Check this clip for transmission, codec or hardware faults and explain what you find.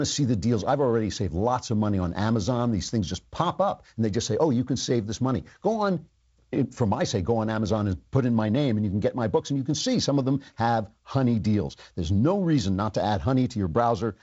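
Nothing stood out on listening to this speech clip that would point to a transmission, codec or hardware problem.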